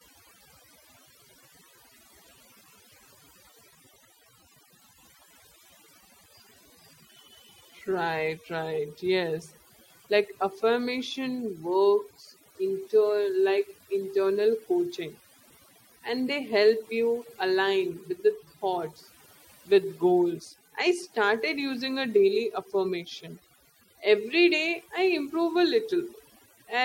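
From start to finish the background is pushed down and speckled by twinkling artefacts. It is overdone noise removal: a noise reducer set too hard shuts down individual frequency bands near its noise estimate, taking quieter parts of the voice too.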